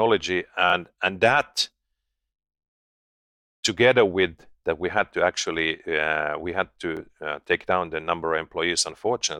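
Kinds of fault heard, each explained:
Bluetooth stutter: a missing wireless packet left the receiver replaying its last buffer, so a 23 ms slice of speech repeats near 0.70 s and again near 6.97 s. A waveform shows a duplicated block with abrupt seams, and a spectrogram shows a short repeated column with vertical edges.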